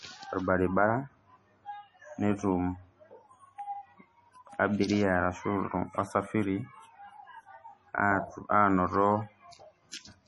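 All the way through, the speech has a watery, swirly quality with nothing above 11.4 kHz, likely heavy MP3 compression at something like 32 kbps.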